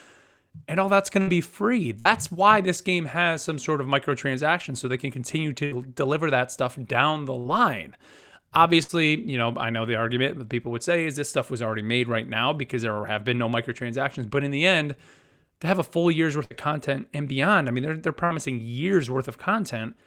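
Bursts of packet loss interrupt the speech at 1.21, 1.99, 5.65, 7.39, 8.83, 16.45 and 18.25 s. Each time about 60 ms went missing. The receiver extended the preceding sound for roughly 60 ms, fading it into a brief buzz or hiss, then jumped ahead.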